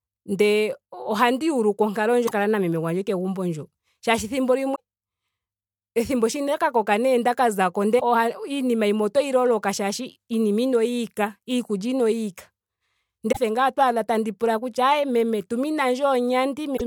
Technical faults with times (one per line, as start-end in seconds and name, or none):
2.23-2.32 damaged data in a compressed stream
4.72-4.80 damaged data in a compressed stream
7.96-8.02 damaged data in a compressed stream
13.28-13.37 damaged data in a compressed stream
16.73-16.81 damaged data in a compressed stream